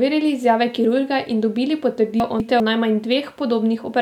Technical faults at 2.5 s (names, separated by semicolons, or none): chunks out of order